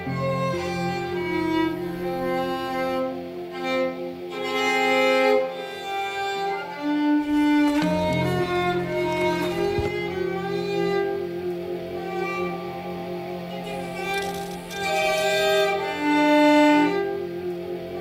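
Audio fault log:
Nothing here needs flagging; it's all good listening with nothing to log.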